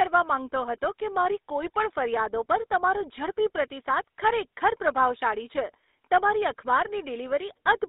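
From start to finish, the speech has passed through a GSM full-rate codec. Its crude vocal-tract model is driven by coarse, regularly spaced excitation pulses, which fits the 13 kbps full-rate standard. The line band runs from 300 Hz to 3.7 kHz, so the speech sounds thin and boxy with no air or low body. The damage is plainly audible as a buzzy, gravelly roughness.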